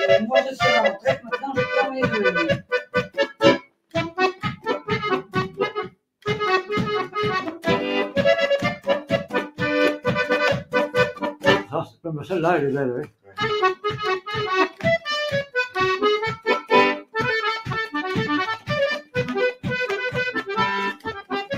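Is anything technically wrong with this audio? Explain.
Yes. A noise suppressor applied to music or sounds is running throughout. It was designed for speech, so it mistakes steady tones, ambience and decays for noise. Gain swings by around 10 dB. Attacks pass through while held material sinks, so the sound pumps and thins.

Sound is also cut by the noise suppressor at 0.97–1.38, 2.58–3.42, 3.58–3.95, 4.35–4.66, 5.23–5.58, 11.65–12.06, 13.06–13.38 and 20.93–21.31 s. In each span it judged the sound as noise and pulled it down by about 13 to 21 dB. Sustained parts drop away, and their tails are cut short.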